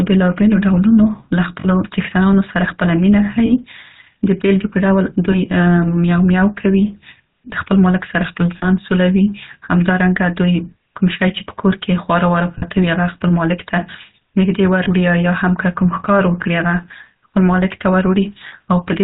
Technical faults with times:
0.00-19.03 GSM full-rate codec
1.60-1.67 lost GSM frames
3.46-3.53 lost GSM frames
5.32-5.37 lost GSM frames
8.58-8.66 lost GSM frames
12.58-12.63 lost GSM frames
14.84-14.87 lost GSM frames
18.48-18.53 lost GSM frames

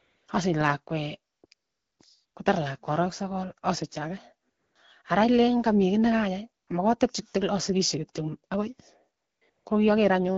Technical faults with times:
0.00-0.27 AMR comfort noise
1.53-1.99 AMR comfort noise
2.25-2.35 AMR comfort noise
4.49-4.75 AMR comfort noise
6.63-6.67 AMR comfort noise
9.17-9.65 AMR comfort noise

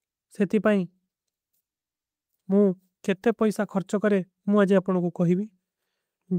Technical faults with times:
none

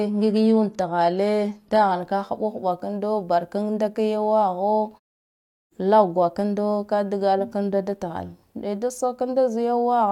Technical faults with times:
0.00-2.00 adaptive stream starting at a low bitrate

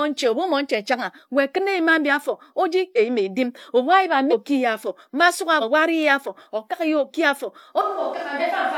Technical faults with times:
2.93-2.98 damaged data in a compressed stream
4.28-4.33 damaged data in a compressed stream
5.58-5.63 damaged data in a compressed stream
7.81-8.78 switch to a distant microphone
8.36-8.42 damaged data in a compressed stream

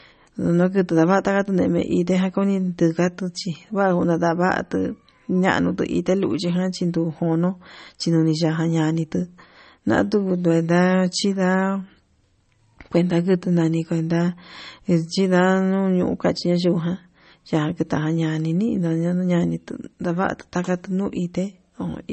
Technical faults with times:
0.00-22.13 MP3 compression

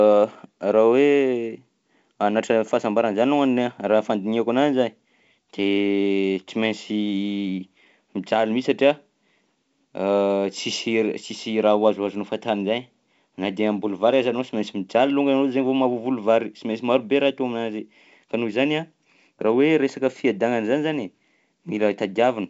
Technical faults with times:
none

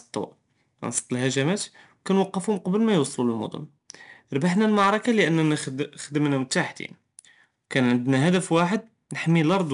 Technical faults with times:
0.00-9.73 4-bit ADPCM compression

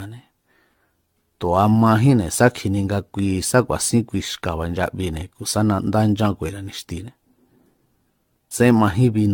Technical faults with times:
0.00-9.34 generation loss

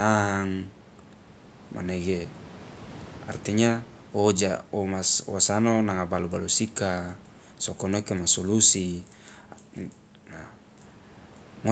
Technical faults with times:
none

